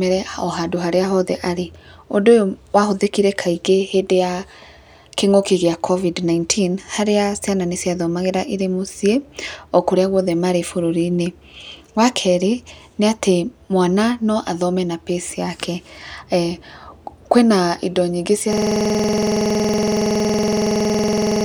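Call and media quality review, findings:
System hang loop from 18.53 s to end, after "kwĩna indo nyingĩ": driver froze, hardware replaying one 46.4 ms ring buffer, which fits a 2048-sample buffer, giving a steady 21.5 Hz buzz.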